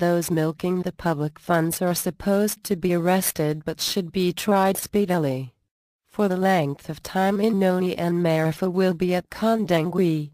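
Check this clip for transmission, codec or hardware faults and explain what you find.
No faults can be heard anywhere in this clip.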